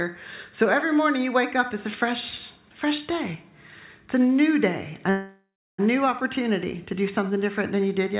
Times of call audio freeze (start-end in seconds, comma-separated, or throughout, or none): 5.10-5.80